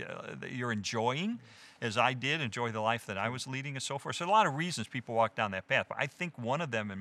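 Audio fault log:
No fault was found in this audio.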